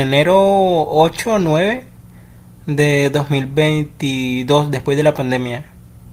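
Speech clip, no technical faults found; the Opus voice coding is running as intended and leaves only a light coding texture on the full audio band.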